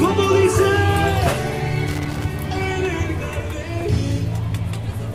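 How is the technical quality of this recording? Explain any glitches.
The recording has one glitch. From 1.87 to 2.25 s there is loose connector crackle. A worn or dirty contact in the signal path makes and breaks as it shifts. This chops the signal repeatedly. It is heard as an irregular burst of scratchy crackle lasting under half a second.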